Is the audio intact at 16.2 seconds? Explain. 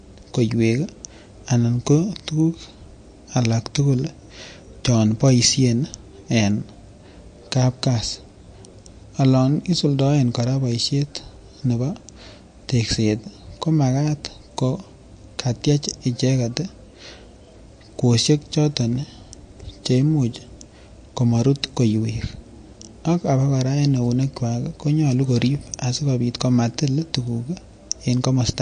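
No. MP3 compression damage runs through the whole clip, including 16.2 s, and is plainly audible there. Nothing reaches above about 9.4 kHz, a hard treble ceiling likely set by an encoder short of bits, which fits a low bitrate of around 48 kbps. With so few bits, weak frequency lines are dropped and flicker in and out between frames, giving the speech a watery, swirling texture, with metallic chirps on s sounds and smeared attacks.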